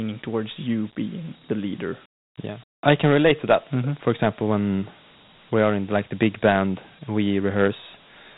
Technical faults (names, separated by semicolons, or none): Dialogic VOX ADPCM